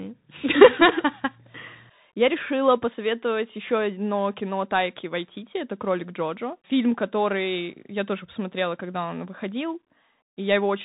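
From start to finish the speech carries Bluetooth CVSD headset codec damage. Nothing passes above about 3.8 kHz, and the one-bit delta coder, which fits a 64 kbit/s link, cannot track fast loud changes, so sibilants turn scratchy while a granular hiss sits underneath throughout.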